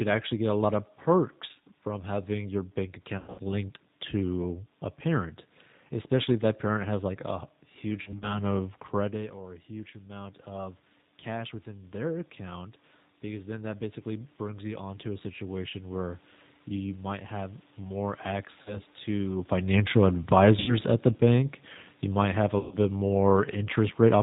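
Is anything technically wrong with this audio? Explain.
Yes, two things. The whole clip runs through the G.729 codec at 8 kbit/s, which rebuilds the speech from a simple vocal-tract model, so everything above 4 kHz is gone and it sounds rough and synthetic.

There's also VoIP packet loss concealed by the speech codec at 3.18–3.40 s, at 8.02–8.41 s after "has like a huge", at 18.62–18.80 s, at 20.60–20.76 s between "to financial" and "at the bank you", and at 22.59–22.77 s after "you might have a". The decoder fills each gap by stretching its last pitch and filter while fading the gain, so you hear a buzzy tone or coloured noise that dies away. The voice then stays weak for a moment afterwards.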